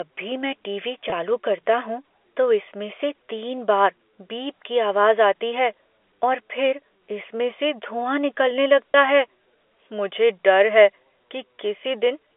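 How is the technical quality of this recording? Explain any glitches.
Two brief dropouts in this telephone-band speech, which runs through G.711 at the usual 300 Hz to 3.5 kHz. Packet loss with pitch repetition hits at 1.10 to 1.12 s, between "भी मैं टीवी" and "करता हूँ तो इसमें", and again at 8.92 to 8.94 s. Each gap is about 20 ms, which fits one lost packet. The receiver repeats the last pitch period to cover it, so you hear a short, slightly buzzy hold.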